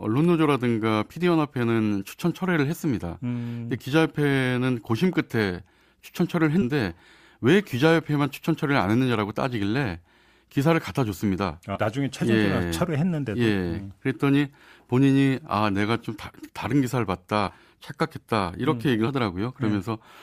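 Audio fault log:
6.61–6.64 s, 11.75–11.79 s, 17.47–17.54 s and 19.07 s: compressed frames skipped. Each time the speech lurches forward, losing roughly 100 ms, 150 ms, 70 ms and 40 ms respectively. Whole blocks of encoded audio were missing or rejected as damaged by the decoder, so playback jumps ahead in steps that fit 20 ms frames.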